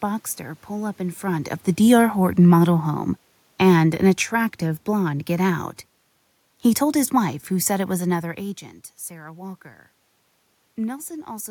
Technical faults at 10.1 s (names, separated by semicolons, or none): none